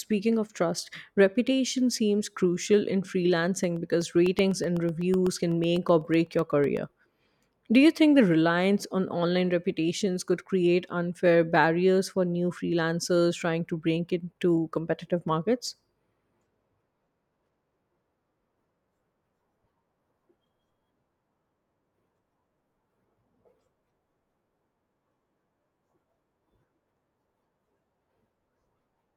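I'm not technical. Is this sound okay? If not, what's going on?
No. From about 3.64 to 6.77 seconds the speech has a steady ticking, about eight small clicks every second, roughly thirty in all. These are periodic USB or driver dropouts. Something on the computer is briefly stalling the USB connection or audio driver at a fixed interval, and each stall drops a tiny sliver of sound, well under a millisecond, leaving a gap of silence. What sets this apart from ordinary crackle or a bad cable is the clockwork regularity.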